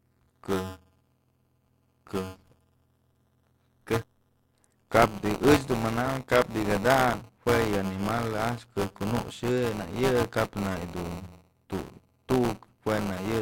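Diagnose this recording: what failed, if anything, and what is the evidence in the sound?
Buffer tearing at the driver or buffer stage: a steady robotic buzz near 188 Hz rides on the speech for the whole clip and drops out in pauses. Writer and reader pointers cross each period, so roughly a tenth of every 256-sample buffer replays audio about 15 ms stale.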